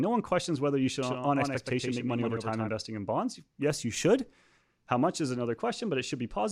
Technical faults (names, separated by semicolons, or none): doubled audio track